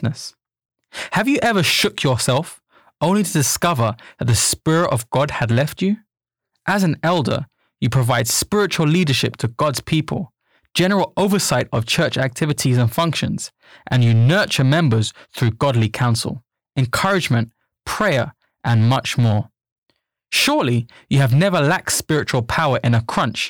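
Hard clipping runs through the whole of the speech: the level is driven about 11 dB past what the stage can pass, so roughly one sample in fifty is sheared flat. Unlike soft saturation's rounded warmth, the flat tops add abrupt, brittle crackle on loud syllables.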